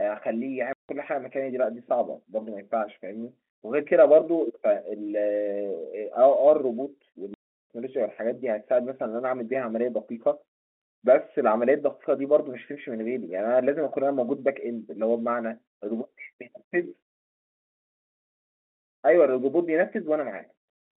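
Speech over a telephone-band line, about 250 Hz to 3.5 kHz as G.711 coding would give, is twice cut by abrupt dead holes: at 0.73 to 0.89 s (160 ms) and 7.34 to 7.7 s (360 ms). This is packet loss filled with silence. Runs of packets never arrived and the receiver played zeros in their place, so the sound stops and restarts sharply. Both gap lengths fit 10 ms packets.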